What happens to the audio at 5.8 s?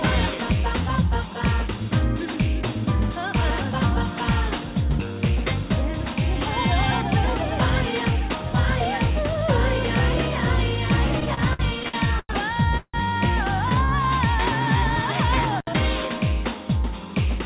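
Nothing goes wrong at 5.8 s: the audio carries on intact through that moment, with only the steady narrowband character of the call path, nothing above 4 kHz, which fits a G.711 telephone codec.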